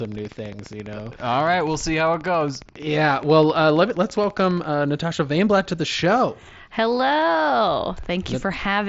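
From 0.05 s to 4.65 s a train of clicks ticks over the speech at a steady 14.8 per second, some seventy near-identical pulses roughly as loud as the voice. Their even spacing separates them from random crackle, likely from nearby equipment interference.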